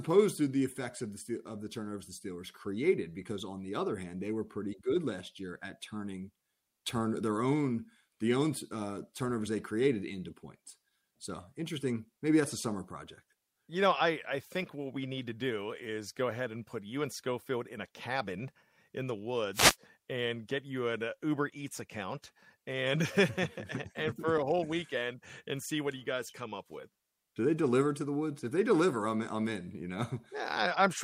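At 19.53 s the radio link of an analogue FM wireless microphone fades, most likely because reflected copies of the signal arrive out of phase and cancel at the receiver. With the carrier weakened, the receiver's own noise rises and breaks through, producing a wireless microphone noise hit: a swish of static lasting about 0.23 s, to 19.76 s.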